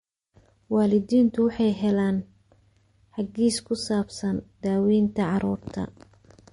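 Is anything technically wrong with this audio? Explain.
Yes. Throughout, the speech sounds watery and swirly with nothing above 10.6 kHz, likely MP3 compression starving bits. That fits a rate near 40 kbps, where weak frequency lines flicker between frames. The flicker, not just the dull top, sets it apart from plain low-pass filtering.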